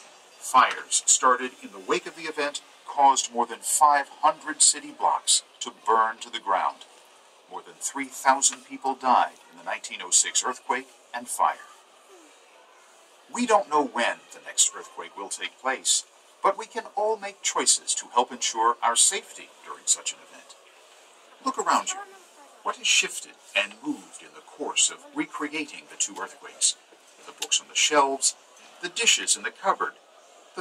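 At 5.90 s there's a single sharp click, the kind you'd see as a thin vertical line running up the spectrogram. It's most likely dropped samples: something like a couple of samples went missing, so the waveform leaps straight from one value to a later one instead of travelling between them. That gap is a tiny fraction of a millisecond, far too short to take any sound away, so all you get is the click.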